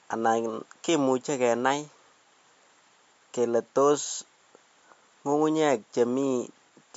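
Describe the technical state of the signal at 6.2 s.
At 6.2 s the speech shows damage from what is likely MP3 compression, present through the whole clip. Everything above 7.6 kHz is gone, and weak frequency components blink on and off between frames, sounding watery and swirly. A spectrogram shows a flat ceiling at 7.6 kHz with patchy holes beneath.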